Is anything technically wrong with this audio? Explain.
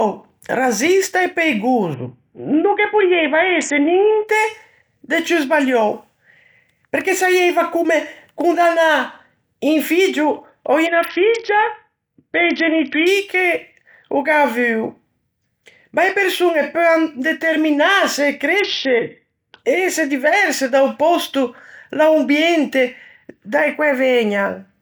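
Yes. The speech goes through three Bluetooth SBC bit pool drops: 1.94 to 4.27 s, 10.86 to 13.06 s, and 18.60 to 19.58 s. Each time the link seems to have gotten congested, and the sender cut the SBC bit pool hard. The sound points to a fall from around 31 down to about 6, roughly 55 kbps. With so few bits the upper sub-bands starve and everything else gets coarsely quantised, so the treble goes dull and a gritty noise creeps in until the rate recovers.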